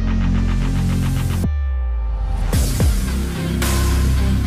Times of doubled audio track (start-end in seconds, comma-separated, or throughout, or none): none